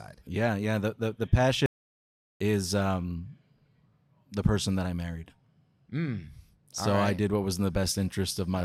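At 1.66 s, just after "the the", the speech cuts out abruptly. This is an audio dropout to silence. The gap runs to 2.40 s, so about 0.74 s of sound is missing. The silence is total, with no room tone underneath. That points to the input being lost while the recorder kept writing silence, likely from a brief disconnect or mute. Whatever was said in that stretch is gone, and speech resumes mid-flow.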